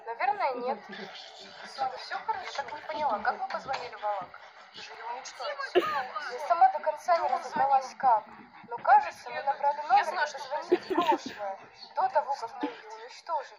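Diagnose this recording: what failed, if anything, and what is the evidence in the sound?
Audio missing between chunks, most likely at the driver or buffer stage: brief skips at 1.97, 4.95 and 10.90 s, each losing roughly 20 ms, spaced on a 3-second grid. The sides join directly with no gap of silence, unlike a dropout.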